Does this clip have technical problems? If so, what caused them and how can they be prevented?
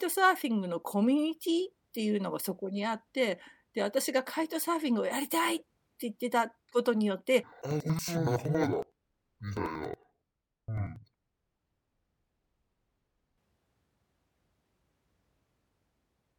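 Yes. From 7.43 s to 13.43 s the speech drops an octave, sounds doubled, and chops at a steady 10.8 Hz. This is interleaved audio read as planar. Each block of alternating left and right samples gets split down the middle, with the first half sent left and the second half right. Both halves then play together at half speed, so the pace holds while pitch falls 12 semitones. The 92.88 ms block length fits a 4096-sample buffer. To prevent it, make sure the consumer's channel-layout setting matches the interleaved format the producer actually delivers.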